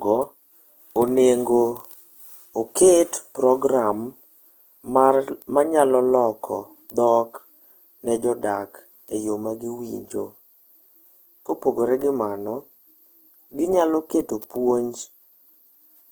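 Speech runs rough and grainy throughout, its tonal parts turned noisy rather than swirly, while content still reaches about 20.1 kHz. The likely cause is Opus compression in music mode, filling starved bands with folded or noise content, which fits roughly 16 kbps.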